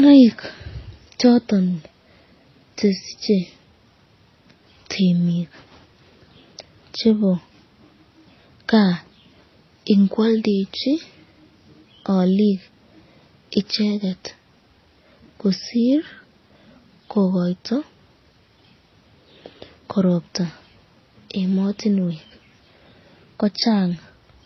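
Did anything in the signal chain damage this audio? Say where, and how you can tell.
Yes, at the codec stage, across the whole speech clip. The sound carries two layers of compression damage at once: watery, swirling high-frequency artefacts on top of smeared, metallic transients. This is transcoding between lossy codecs, which fits a low-rate MP3 at around 24 kbit/s likely re-encoded as HE-AAC at a similar rate. The second encoder wastes bits reproducing the first one's artefacts and adds its own. On a spectrogram, the top band shows a hard cut-off with patchy, copied-looking texture above it, and transients smear in time.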